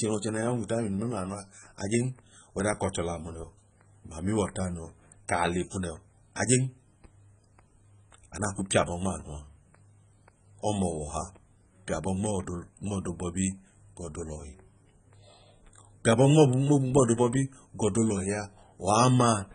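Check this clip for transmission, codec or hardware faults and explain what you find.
There are two faults: a heavy codec degradation across the whole clip, and three short bursts of hard clipping near the end.

Throughout the speech the sound is dull and smeared, with a warbling, fizzy texture on sustained vowels and sibilants and nothing at all above 9.6 kHz. The likely cause is heavy AAC compression at a very low bitrate, around 16 kbps. The encoder quantises its frequency lines so coarsely that it drops the top band, leaves spectral holes and fills some bands with substitute noise.

From 16.07 to 16.42 s, 16.97 to 17.12 s and 18.90 to 19.33 s, loud peaks crackle. This is hard clipping. The signal exceeded what a stage could pass by about 5 dB, 2 dB and 4 dB respectively, so the peaks were sliced flat. Those flat tops generate harmonics high in the spectrum.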